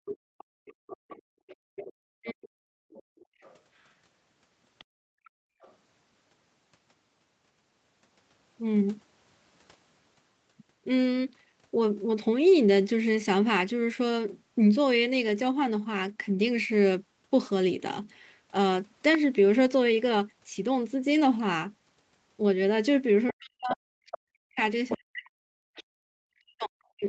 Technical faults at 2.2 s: other side's voice leaking through; background gated by the echo canceller; speech suppressed in double talk

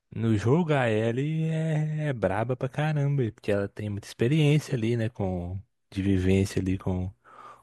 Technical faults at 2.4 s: none

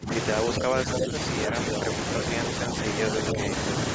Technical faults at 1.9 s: none

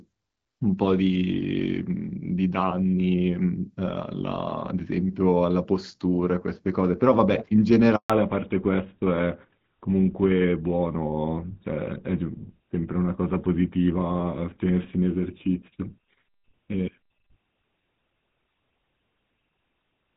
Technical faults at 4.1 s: none

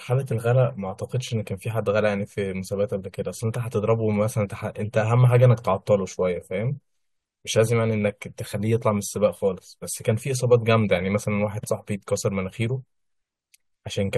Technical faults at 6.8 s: none

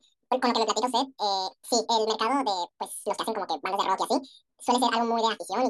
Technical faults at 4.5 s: audio read two samples at a time (double speed)

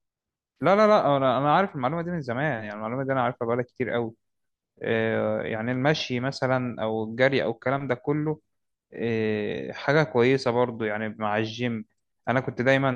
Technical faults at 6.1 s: none

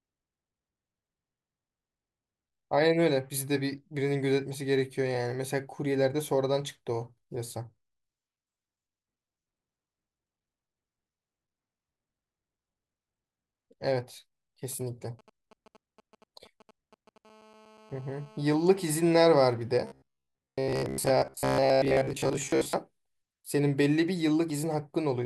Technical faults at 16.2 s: GSM signalling bursts

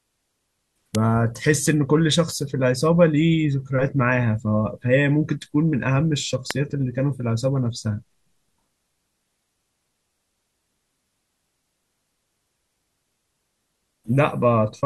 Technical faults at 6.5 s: electrical switching spike

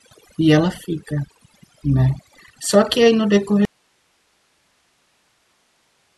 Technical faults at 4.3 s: overdone noise removal; audio dropout to a faint residue

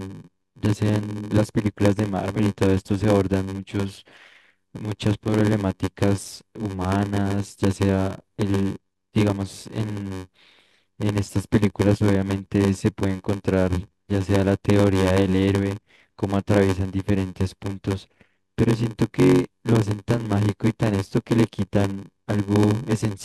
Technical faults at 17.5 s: block size mismatch (padded)

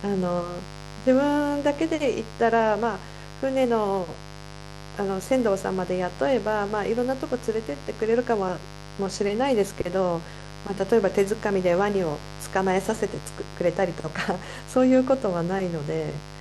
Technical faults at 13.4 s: mains buzz

